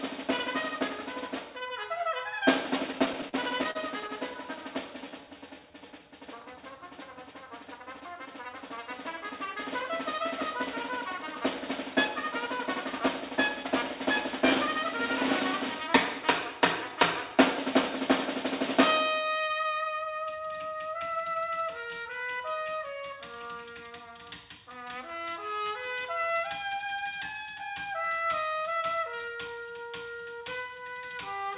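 Repeated stalls (stutter) run from 2.92 to 4.11 s. Packets reached the receiver late or too slowly, so its jitter buffer ran dry eleven times. Each time, the receiver stretched the last sound to cover the wait, for 168 ms in all, and the longest gap was 43 ms. About 14% of that stretch is filled-in sound rather than new audio. Nothing is lost, but the sound hiccups and drags forward in small catches.

A jitter buffer slow-down follows from 4.97 to 6.00 s. With its reserve low, the receiver rebuilt it by repeating single pitch periods and slivers of pauses, adding 162 ms. Playback drops to 85% speed without any change in pitch, so sounds are drawn out noticeably. A milder slow-down at 16.89 to 17.74 s adds 52 ms at 95% speed, a subtle lengthening.

Jitter buffer speed-up appears from 8.00 to 12.57 s. The buffer was holding more audio than its target, so the receiver trimmed short pitch-period pieces, roughly 50 ms in total. 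At 101% speed the change is barely perceptible. A second speed-up at 25.64 to 26.01 s removes a similar amount over a much shorter stretch, reaching 111% speed, and that passage sounds briefly hurried at unchanged pitch. Throughout, nothing reaches above 4 kHz, which fits a 64 kbps G.711 mu-law call path.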